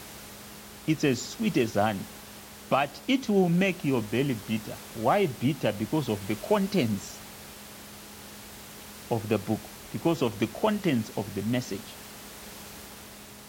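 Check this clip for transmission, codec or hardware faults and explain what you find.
No transmission, codec or hardware faults.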